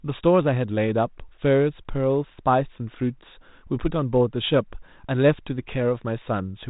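No technical faults can be heard in this speech recording.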